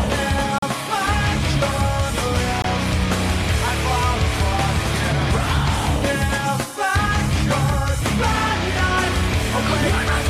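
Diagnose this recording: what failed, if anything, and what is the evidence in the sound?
A gap between stream segments at the playback stage: hard-edged silences at 0.58 to 0.62 s (about 42 ms) and 2.62 to 2.64 s (about 22 ms), about 2 s apart, which fits 2 s segments whose timestamps leave holes. Unlike a dropout, nothing is missing; the sound resumes exactly where it stopped.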